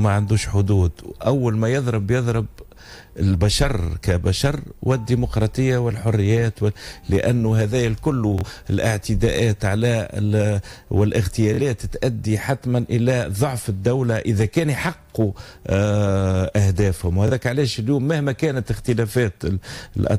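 Bluetooth stutter hits three times. At 8.38 to 8.45 s and again at 11.54 to 11.61 s, the stream drops out for about 46 ms, which fits two lost packets. At 17.28 to 17.31 s, about 23 ms goes missing, which points to a single packet. Each time, the receiver replays its last short slice of audio. That gives a quick buzzy repeat. The sound then jumps ahead, as if it had played on.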